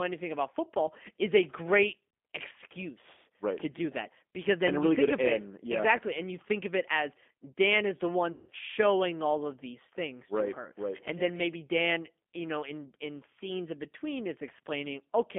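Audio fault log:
throughout G.729 codec: an 8 kbit/s pulse-coded rebuild limited to about 200 Hz to 3.5 kHz, leaving plainly audible roughness, a synthetic edge and no upper treble.
8.32–8.50 s VoIP packet loss concealed by the speech codec: after "is the", about 160 ms goes missing and the decoder stretches its last pitch and filter into a fading buzzy tone or coloured noise before "showing all of these".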